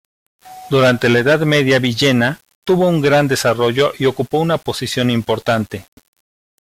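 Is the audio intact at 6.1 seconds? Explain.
No. At 6.1 s, as throughout the clip, the speech carries grainy distortion that tracks the signal, with quiet parts turning gritty. This is likely low bit depth without dither: rounding to about 7 bits leaves error roughly 35 dB below the speech.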